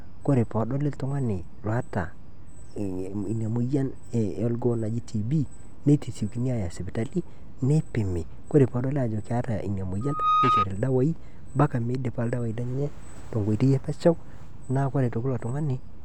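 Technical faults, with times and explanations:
10.01–10.66 s, loudspeaker feedback squeal after "peedoli aajo keeta ina": a 1.2 kHz tone swells over about a third of a second to roughly 5 dB above the speech as the mic–speaker loop runs away. It shows as a bright horizontal line on a spectrogram and a thickening sinusoidal envelope on the waveform. It stops before "ildawai mpaka midipa ildawai".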